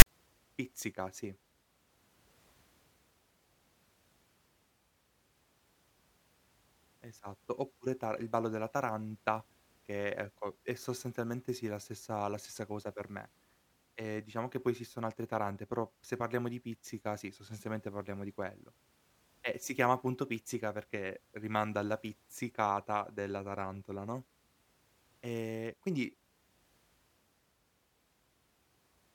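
File tags played as audio open the clip, from 0.00 to 0.06 s. A block of metadata at the head of the file has been decoded as if it were sample data. The text portion turns into a loud, harsh rasp pushed off to one side, since character bytes sit well away from zero, and the zero padding behind it drops to dead silence. The result is a brief, hard-edged burst of static before the speech begins.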